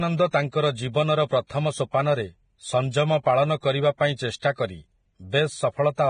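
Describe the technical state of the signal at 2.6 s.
Vorbis compression runs through the whole clip, including 2.6 s: nothing above 9.7 kHz, and grainy, hissy treble where coarse quantisation has replaced fine detail with noise. This is likely heavy low-bitrate Vorbis coding.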